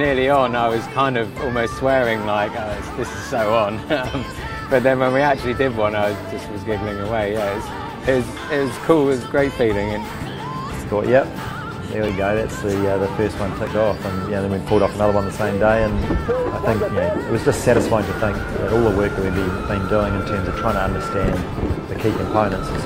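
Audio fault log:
10.11 s, 12.09 s, 13.67 s: dropped buffer (overrun). At each point the audio jumps forward with no gap of silence, as if a short piece had been cut out and the ends butted together. About 5 ms goes missing at 10.11 s and 12.09 s, and about 20 ms at 13.67 s, so the last skip is the largest. The likely cause is the capture program failing to read a buffer before the hardware overwrote it.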